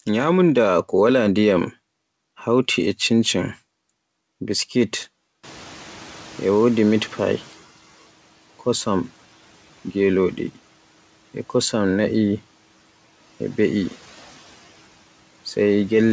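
Speech, where the room noise jumps by around 20 dB at about 5.5 s and the noise suppressor catching up follows: from 5.43 to 7.63 s the new noise leaks through, then sinks by about 9 dB over roughly 2.2 s as the estimate adapts. The call codec's band limit at 8 kHz is present too, as expected.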